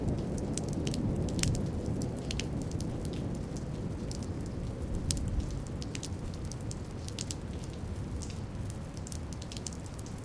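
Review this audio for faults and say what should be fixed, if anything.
Nothing stood out on listening to these sounds, so there is nothing here that needs fixing.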